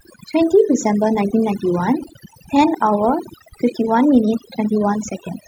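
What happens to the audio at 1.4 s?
At 1.4 s you're hearing overdone noise removal, and it isn't just that moment; it runs through the whole clip. The noise reducer was pushed too hard, so any frequency band sitting near its idea of the noise floor gets clamped way down or shut off entirely, and the softer parts of the speech get caught too. That's why the gaps go almost dead with little twinkling specks.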